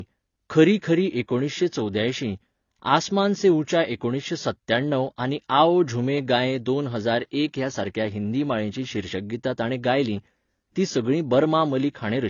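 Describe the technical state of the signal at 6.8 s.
At 6.8 s, as throughout, the speech likely passed through a low-bitrate encode before being saved at a high bitrate; the artefacts of that first pass remain.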